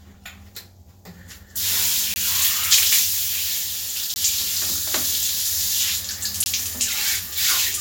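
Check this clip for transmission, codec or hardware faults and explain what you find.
Three blocks of digital silence interrupt the sound, each about 20 ms long: 2.14 to 2.16 s, 4.14 to 4.16 s and 6.44 to 6.46 s. At each one the signal drops straight to zero and returns with no fade, and the dropout is heard as a short pop-like hole. This fits the output buffer not being filled in time, with the player sending zeros for those samples instead.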